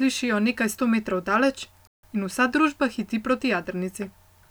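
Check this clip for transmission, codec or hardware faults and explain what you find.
One fault is present, a playback stall in the speech at 1.87 to 2.03 s, just after "nekaj sto metrov daleč". The player likely ran short of data or had its output thread blocked, so the output falls silent for about 0.16 s mid-flow before resuming.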